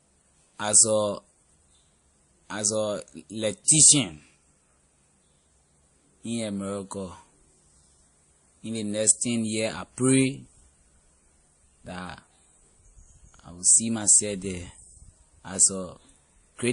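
From start to finish the speech sounds dull, with nothing above 10.6 kHz, and two layers of compression artefacts sit on top of each other and are heard together. That mix points to transcoding between lossy codecs, likely a low-rate MP3 stage around 40 kbit/s re-encoded to WMA around 64 kbit/s. The second encoder wasted bits preserving the first one's artefacts, and the lower bandwidth limit remained.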